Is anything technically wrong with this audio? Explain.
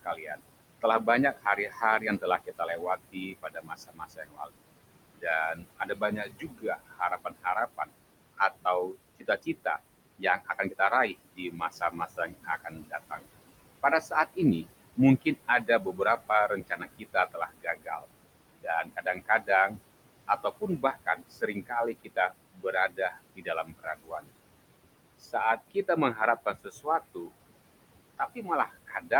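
Yes. Noise suppressor artifacts run through the whole clip. The suppressor pulls bands it judges to be steady noise down by about 21 dB, frame by frame. The room noise, about 13 dB below the speech, sinks in pauses and rises under speech.

Speech cut by the noise suppressor occurs at 0.03–4.56, 5.18–9.66, 10.19–10.74, 11.32–13.21, 13.83–18.06, 18.59–24.27, 25.20–27.34 and 28.18 s to the end. The suppressor mistakes soft speech for noise and lowers it by about 15 to 21 dB, so quiet consonants and word endings sound swallowed.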